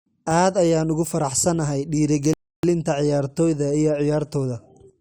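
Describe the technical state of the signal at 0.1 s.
At 0.1 s the speech signal is intact, with no audible fault at that moment.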